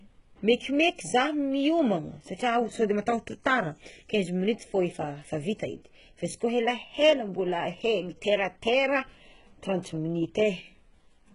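Heavy HE-AAC compression runs throughout the speech, likely the cause of the gritty, lispy s sounds. The treble is rebuilt from copied lower bands rather than coded, so its harmonics misalign, and nothing reaches above 11 kHz, which fits a very low bitrate around 12 kbps.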